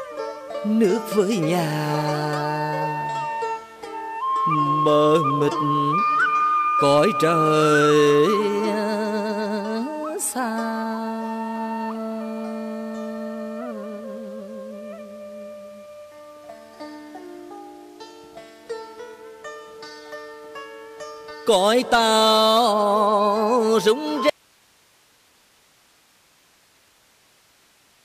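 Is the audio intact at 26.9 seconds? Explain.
No. At 26.9 seconds the clip is inside an audio dropout to a faint residue that begins abruptly at 24.30 s and runs to the end. The wanted sound vanishes mid-flow, leaving only hiss roughly 35 dB below the normal signal level. Because the gap holds live noise rather than digital silence, the likely cause is a break upstream of a path that stayed powered and open, such as a lost connection feeding a still-active input.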